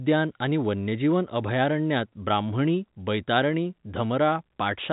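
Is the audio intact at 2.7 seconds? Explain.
Yes, at 2.7 s the audio is intact, with the speech carrying on through the narrowband telephone coding and no dropout, click or distortion at that point.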